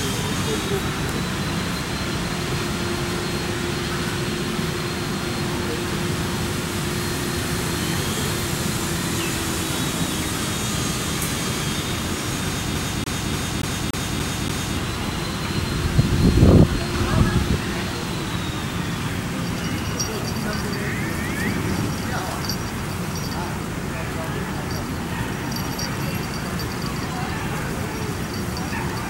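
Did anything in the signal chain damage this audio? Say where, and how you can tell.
Yes. The damage happens at playback, where the CD is stuck on one turn from about 12.75 s to 14.77 s. The same slice of sound, roughly 0.29 s long, repeats seven times, with a brief mute at each jump, producing a fast, perfectly even stutter. That regularity is the giveaway: a scratch keeps throwing the laser back one track at the same point on each rotation, so the player replays one revolution's worth of audio until it breaks free.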